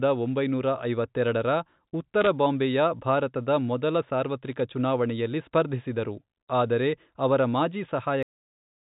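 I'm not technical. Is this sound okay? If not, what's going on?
No. Around 2.21 to 2.27 s and again from 4.46 to 4.60 s, short bursts of sharp ticking crackle sit over the speech. These are bit errors on a digital phone line: a few stray flipped bits each corrupt single samples of the telephone-quality signal. At 8.23 s the speech stops dead mid-sound, falling straight to silence. That is a cut-off end: the final stretch of audio was never saved or played back.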